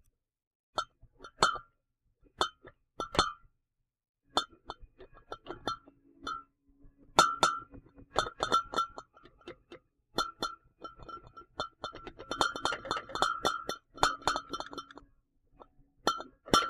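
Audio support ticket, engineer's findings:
Doubled audio track, 7.08–15.00 s: full-band copy trailing by around a fifth of a second, about 5 dB down, no decay. Likely second capture path or misaligned edit. Waveform shows offset repeated transients; spectrogram shows ghost onsets, hard start/stop.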